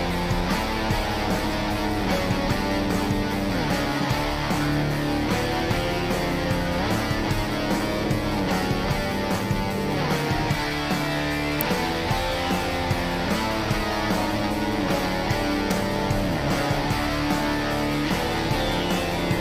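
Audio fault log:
11.61 s and 15.71 s, electrical switching spike: two sharp snaps laid over the sound, the first loud at roughly -5 dBFS, the second roughly 10 dB quieter. Each is a brief impulsive arc picked up on the audio line, likely from a nearby switch or motor.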